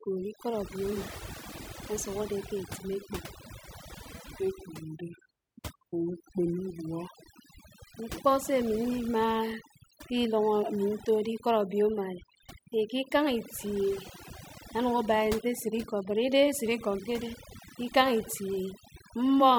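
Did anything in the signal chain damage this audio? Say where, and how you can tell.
Yes. A noise reduction stage was set far too strong, and the damage runs through the whole clip. Overdone noise removal pulls individual frequency bands down whenever they sit near its noise estimate, so the background collapses into near silence with twinkling specks while quieter parts of the speech vanish.

A section at the wrong speed runs from 3.92 to 7.94 s. It plays at 0.856 times normal speed, so pitch and pace drop together by about three semitones, making the speech sound deeper and slower. That points to a likely clock mismatch in editing or playback for that stretch.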